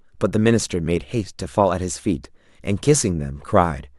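At 2.25 s there is an overlap between stream segments. Two roughly 2-second segments claimed the same stretch of time, and the joint discarded about 11 ms of real sound. It is heard as a tiny skip. The waveform shows a sudden discontinuity, and the spectrogram shows a thin vertical broadband line.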